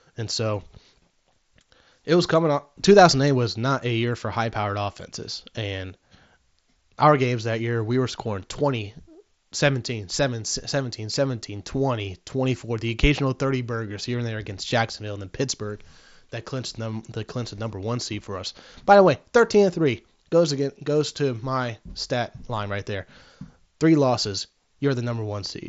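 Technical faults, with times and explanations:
No faults can be heard in this speech.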